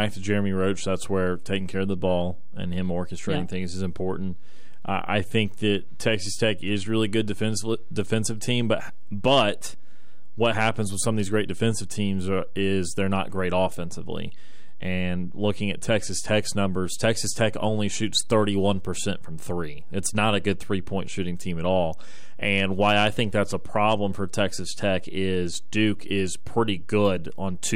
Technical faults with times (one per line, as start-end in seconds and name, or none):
0.00-27.75 DC offset